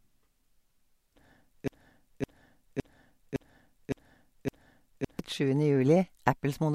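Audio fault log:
1.68 to 5.19 s, broken-record loop: a 0.56-second slice of the speech repeats exactly, back to back, six times, and the speech meant for that span is lost. The player or stream likely stalled and kept resending the last fragment it held.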